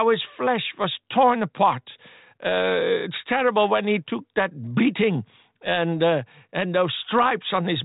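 The speech carries no audible technical faults.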